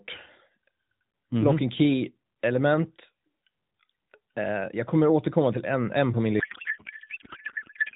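A speech clip carried over AMR narrowband, with the light band-limited, slightly synthetic colour you'd expect at 12.2 kbps. The real problem is a codec payload misread starting at 6.40 s, right after "en en på min", and running to the end at 7.96 s. The speech collapses into garbled warble and noise that barely tracks it, which is what you get when octet-aligned AMR frames are unpacked as bandwidth-efficient, so every field lands in the wrong place.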